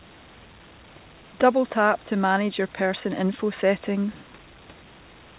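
In this speech clip the automatic gain control judged the input too quiet and ramped its gain upward, an automatic gain rising that runs from 1.73 to 4.18 s and adds about 5 dB. Because the gain acts on the whole signal, the voice and the faint room noise, about 33 dB below the speech, swell together over those two and a half seconds. All of it sits in a band ending at 4 kHz, which fits a narrowband call codec such as G.711.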